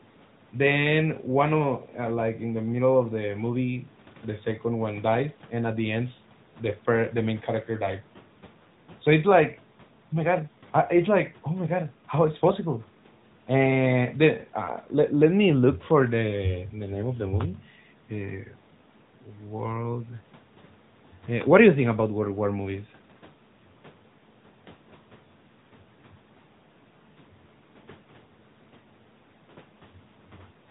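The speech ran through the AMR narrowband mobile codec at a fairly high rate that fits about 10 kbps throughout, cutting everything above 4 kHz and leaving it muffled, buzzy and synthetic.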